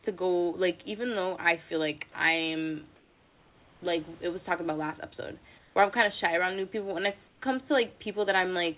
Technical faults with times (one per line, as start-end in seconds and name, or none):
0.04 sound dropped by the voice detector
2.96-3.82 comfort noise in place of the background
5.58-5.76 comfort noise in place of the background
7.28-7.42 comfort noise in place of the background